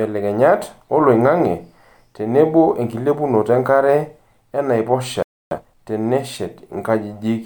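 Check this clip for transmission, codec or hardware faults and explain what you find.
Two faults sit close together near the end of the speech, both in the playback chain.

A playback stall runs from 5.23 s to 5.51 s: the speech cuts off mid-flow and the output stays silent for about 287 ms. The likely cause is the player running out of buffered data, or its output thread being briefly blocked, before feeding the device again.

Time-compressed catch-up follows from 5.51 s to 5.79 s. To clear the backlog left by the stall, the player cuts out short segments and cross-fades the remainder, playing the speech at twice normal speed. It sounds rushed but keeps its normal pitch.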